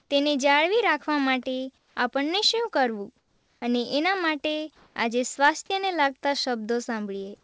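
Comfort noise in place of the background appears at 0.00 to 0.10 s, 1.78 to 1.96 s, 3.18 to 3.62 s and 4.76 to 4.96 s. The sender likely stopped transmitting during pauses, so the receiver filled them with steady, featureless synthetic noise. It sits about 2 dB louder, about 6 dB quieter, about 2 dB quieter and about 5 dB louder than the real background, so the level jumps at each pause.

Sound dropped by the voice detector occurs at 5.36 s, where 20 ms of speech gives way to that same flat noise. The detector likely mistook part of the speech for background and stopped sending until it triggered again.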